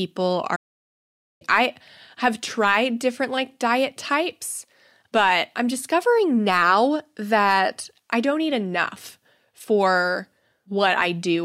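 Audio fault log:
0.55–1.42 s playback stall: the speech halts mid-flow into about 0.85 s of clean silence, far longer than a brief dropout, likely the player starved of data.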